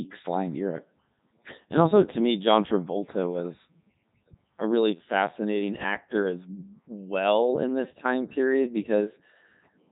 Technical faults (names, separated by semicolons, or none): Codec 2 vocoder